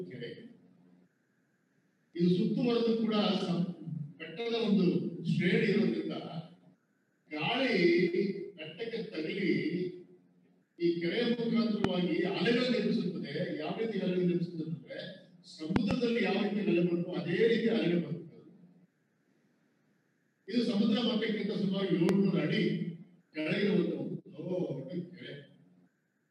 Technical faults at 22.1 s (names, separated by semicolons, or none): loud pop